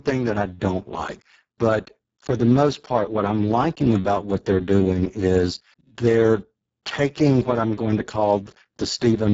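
It's a speech recording that runs through the Speex codec from start to finish, and it's been squeezed hard. The voice comes out hoarse and grainy. That's starved CELP excitation, which fits a very low bitrate of roughly 6 kbps. Nothing sits above 7.7 kHz.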